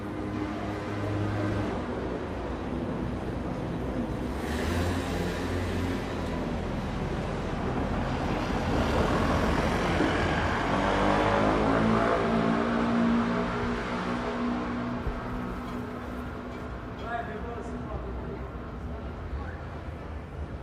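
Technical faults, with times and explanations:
No technical faults can be heard anywhere in this recording.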